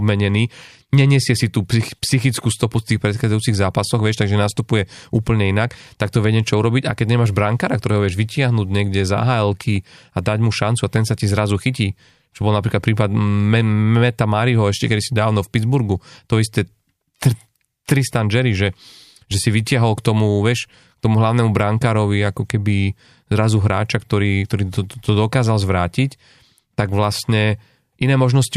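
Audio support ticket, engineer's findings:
Speech signal checked in full, no audible technical fault found in the capture or transmission path.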